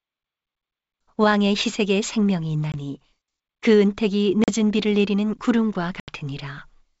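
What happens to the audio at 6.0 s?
Packet loss on an ADPCM call, from 6.00 to 6.13 s: about 80 ms of a few lost packets becomes a hard-edged silent gap, then the speech returns distorted until the decoder's predictor and step size resynchronise.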